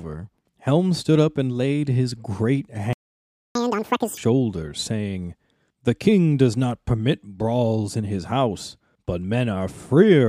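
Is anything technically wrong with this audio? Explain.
Yes. There are two related faults.

At 2.93 s the speech cuts out in mid-flow and stays silent until 3.55 s, a gap of about 0.62 s. This is a playback stall, most likely the player running dry of buffered data or its output thread being blocked. When the sound returns, it picks up where it stopped.

From 3.55 to 4.17 s the speech runs at twice normal speed and its pitch jumps by around ten semitones, giving a chipmunk-like quality. This is catch-up at higher speed: the player resamples its backlog to recover the lost time, then returns to normal rate.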